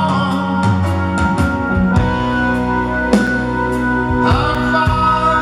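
At 3.27 s the audio drops to a block of digital silence lasting 5.8 ms, which fits a 256-sample buffer that was never filled in time. The signal cuts out and back with no fade, and the whole event is heard as a tick or dip. A second, shorter block of digital silence, 3.72 ms long, follows at 4.55 s and gives a similar tick or dip.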